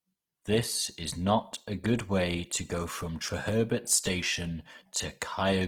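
From start to finish the speech carries plainly audible Opus compression, likely from an encoder starved of bits. The sound keeps its full bandwidth, but the tonal parts of the speech turn grainy, rough and noisy instead of smooth. This is the music-mode behaviour: each band's energy is preserved, but with too few bits to code the detail, bands are filled by folding lower ones or with noise. The damage fits a rate near 16 kbps.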